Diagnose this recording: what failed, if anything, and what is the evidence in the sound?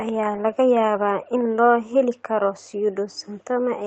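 Nothing failed in this recording.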